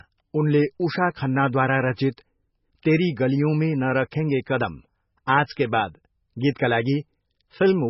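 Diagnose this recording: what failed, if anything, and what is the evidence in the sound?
Codec stage: the speech carries MP3 compression damage from start to finish. Nothing is present above 5.6 kHz, and the remaining band is watery and swirling, with s sounds breaking into metallic chirps and consonant attacks smeared. A plain low-pass filter or narrowband line would dull the top cleanly. Here weak spectral lines flicker on and off between frames, the mark of a starved encoder, likely one running near 16 kbps.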